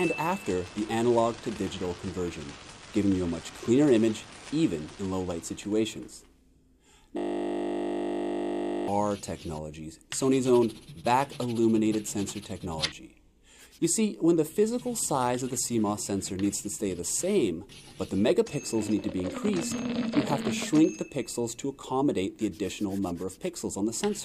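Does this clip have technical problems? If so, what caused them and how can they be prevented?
Yes. From 7.18 to 8.88 s there is a system hang loop: the system froze while the hardware kept replaying one 20 ms slice of its ring buffer about 85 times, producing a steady 50 Hz buzz. A driver watchdog that mutes output on stalls prevents it.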